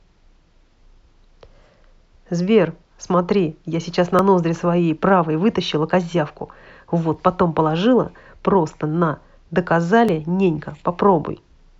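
From 1.24 s to 10.09 s there's a regular click roughly every 2.95 s, about four in all, during the speech. That steady spacing points to clock drift buffer slips, likely from two clocks disagreeing by around a tenth of a percent, so a short block of samples gets dropped or repeated each time.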